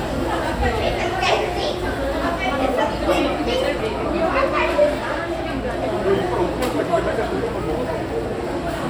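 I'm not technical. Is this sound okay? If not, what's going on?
No. Compressed frames were skipped: small chunks of the file, each about 26 ms, were missing or rejected as damaged. At 3.78 s the sound jumps ahead roughly a fifth of a second, and at 5.87 s about 0.15 seconds.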